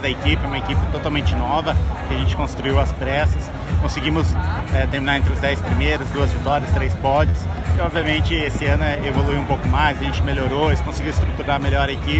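At 7.29 s, lasting until about 7.35 s, there is a short concealed packet loss. Roughly 40 ms of audio never arrived in time, and the receiver covered the gap by extending the preceding sound and then crossfading back into the real signal. It is heard as a brief smear or wobble. On a spectrogram the 40 ms patch shows flattened, repeated harmonics or smooth noise, all below the 8 kHz ceiling set by the call path. The waveform shows a looped-looking stretch with no true silence.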